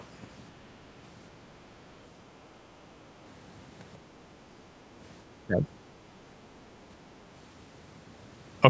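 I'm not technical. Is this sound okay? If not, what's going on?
No, not quite. Right at the very start, from 0.00 to 0.04 s, there's a tiny, very faint trace of another voice underneath. That's the other side's voice leaking through: likely the speaker's device played the far end out loud and the echo canceller didn't fully scrub it from the microphone.

Then around 5.47 to 5.67 s, for about a fifth of a second, the voice noticeably dips and goes quieter. That's speech suppressed in double talk. Likely both people spoke at once, and the call's echo handling turned the speaker down along with the echo it was trying to remove.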